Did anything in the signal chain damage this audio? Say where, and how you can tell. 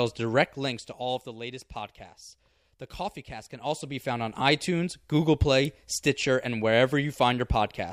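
No, nothing damaged this speech.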